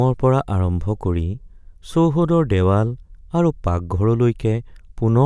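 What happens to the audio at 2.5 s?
Nothing goes wrong at 2.5 s; the speech runs through that moment intact, with no dropout, click, distortion or other fault to be heard.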